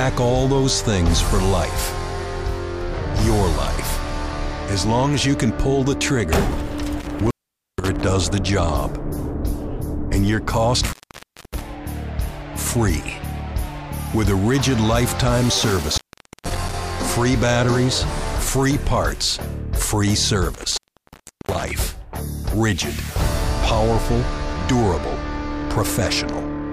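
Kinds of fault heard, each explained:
Intermittent contact: The sound breaks up four times, at 7.00 to 8.04 s, 10.84 to 11.62 s, 15.70 to 16.74 s and 20.54 to 21.71 s, with crackle at the edges. In each episode the signal drops out for about 0.48, 0.60, 0.48 and 0.71 s respectively, leaving hiss. A loose cable or plug is momentarily losing connection, so the signal path opens and then scrapes shut again.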